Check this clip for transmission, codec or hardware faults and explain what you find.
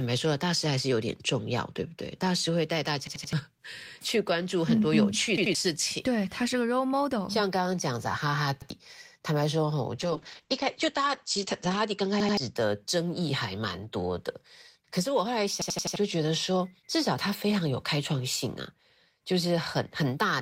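Two kinds of fault appear in this speech clip: five repeated-buffer stutters and one call bitrate drop, with the fourth stutter landing inside the drop.

The repeated buffer occurs at 3.07–3.33 s, 5.38–5.55 s, 8.62–8.70 s, 12.20–12.37 s and 15.62–15.96 s. Fresh audio missed its deadline, so the output replayed its last block, an 85 ms chunk that fits a 4096-sample buffer. The block plays again one to four extra times, each with a hard join, producing a rhythmic stutter. The longest runs, at 3.07 s and 15.62 s, drop roughly a third of a second of speech. Packet-loss concealment would smear or fade the gap. Here the identical slice repeats exactly at a fixed period.

The call bitrate drop runs from 9.99 to 12.61 s. The encoder was pushed from 32 to 10 kbps and stays at the floor for about 1.8 s. At that rate the coding grows coarse and watery, and the audio bandwidth shrinks from 20 kHz to 8 kHz, so the speech turns muffled and rough. 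A plain low-pass filter would only dull the top end. The grainy texture and the recovery at 12.61 s point to a bitrate change.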